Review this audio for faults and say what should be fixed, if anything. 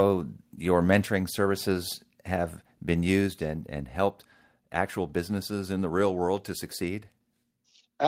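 Microphone overload, likely from an input level set too high, pushes peaks about 2 dB past the converter's ceiling between 0.91 and 0.97 s. A small share of samples get their tops sliced flat, giving that stretch a harsh, crackling edge. Lower the input gain to leave headroom.

Microphone volume stepped down twice, likely the call software reacting to that overload. At 1.02 s the input drops about 4 dB, and at 3.27 s it drops about 3 dB more. Voice and background fall together in abrupt steps. Disable automatic microphone adjustment once proper headroom is set.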